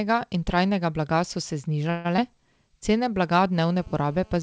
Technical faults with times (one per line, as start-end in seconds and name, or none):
1.90-2.07 call audio freeze
2.17-2.20 short concealed packet loss
3.53-4.43 GSM phone buzz